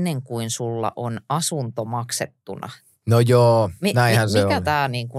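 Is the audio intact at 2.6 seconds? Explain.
Yes, the speech at 2.6 seconds is intact, with no dropout, click, distortion or other fault at that moment.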